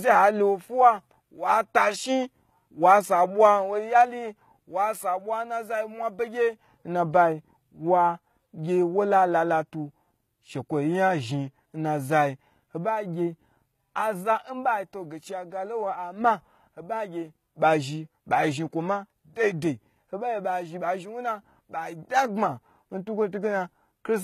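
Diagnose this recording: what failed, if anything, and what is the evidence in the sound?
The codec stage is the likely culprit: the speech sounds like HE-AAC compression at a low rate, around 20 kbps, all the way through. The treble is rebuilt by band replication rather than coded, so sibilants come out gritty and metallic, with nothing above about 14.9 kHz.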